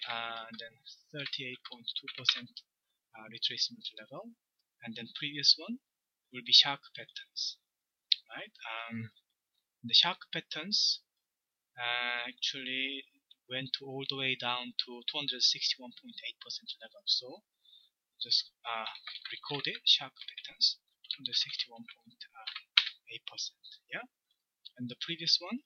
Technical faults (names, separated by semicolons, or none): none